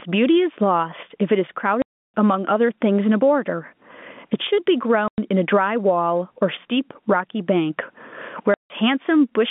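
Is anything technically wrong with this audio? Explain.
Yes. Throughout the clip the level pumps with every loud sound, swinging by roughly 25 dB and leaving loud and quiet passages squashed together. This gain pumping is likely caused by the input gain being set far too high, with a fast limiter or compressor clamping down on each loud sound.

There is also packet loss filled with silence. The audio drops out abruptly from 1.82 to 2.14 s (320 ms), from 5.08 to 5.18 s (100 ms), and from 8.54 to 8.70 s (160 ms). All three lengths are multiples of 20 ms, which fits 20 ms packets going missing and the receiver inserting silence in their place. Through all of this the G.711 telephone coding holds the sound to the narrow line band of about 150 Hz to 3.5 kHz.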